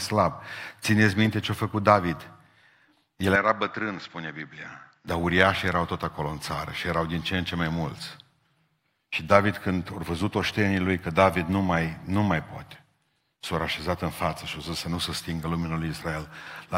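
At 3.36 s the speech abruptly turns duller and a bit quieter, a few dB down, with nothing above about 7.6 kHz. A faint new noise floor sits well below the speech. There's no gap at the changeover, and at 5.08 s the full brightness snaps back. That pattern points to the input switched to a poorer device, likely a fallback mic or headset profile with a narrower band and its own level and background noise.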